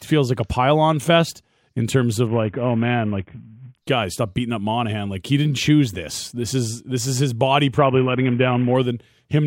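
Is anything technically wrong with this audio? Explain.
Yes. Twice, from 2.27 to 3.78 s and again from 7.78 to 8.75 s, the speech turns dull and loses its treble while a gritty, grainy noise rises beneath it, then clears. This is a Bluetooth SBC bit pool drop: the link shrank the encoder's bit budget, which points to a fall from a bit pool of 31 to about 5, near 50 kbps, starving the top sub-bands and coarsely quantising the rest.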